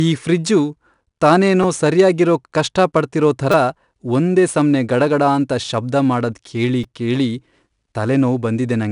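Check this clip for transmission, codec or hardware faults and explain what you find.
Two faults are present: 4-bit ADPCM compression throughout, and three repeated-buffer stutters.

The 4-bit ADPCM compression leaves gritty hiss riding on loud speech. Each sample is a coarse predicted step. Nothing sounds above 10.6 kHz, which fits roughly 89 kbps.

The repeated buffer comes at 1.63 s, just before "ಸರ್ಯಾಗಿರೋಕ್ ಕಷ್ಟಪಡ್ತಿರೋ". It returns from 3.52 to 3.54 s, after "ತಾನೇನೋ ಸರ್ಯಾಗಿರೋಕ್ ಕಷ್ಟಪಡ್ತಿರೋ", and at 6.84 s, after "ಗಡಗಡಾಂತ ಶಬ್ದ ಮಾಡದ್ ಕೇಳಿ". Late audio made the last tiny slice replay, which fits a 5 ms buffer. Each repeat is heard as a brief click or buzz.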